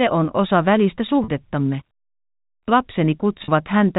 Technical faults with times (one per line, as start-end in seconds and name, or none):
1.24-1.28 packet loss with pitch repetition
3.44-3.48 packet loss with pitch repetition